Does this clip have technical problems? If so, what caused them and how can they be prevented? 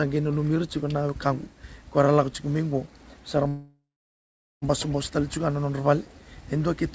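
Yes. A call audio freeze runs from 3.48 to 4.65 s: the sound stretches into a fading buzz or hiss, then about 0.8 s of silence, before resuming where it stopped. Nothing is lost, but everything after it now arrives about 1.1 s later. The likely cause is packets held up in transit until the jitter buffer ran dry. On a spectrogram the last frame smears horizontally and fades to a blank band, and the waveform flattens to near zero. A more stable network path or a deeper jitter buffer would prevent it. Above 8 kHz the spectrogram is empty throughout, which fits the G.722 call codec at 64 kbps.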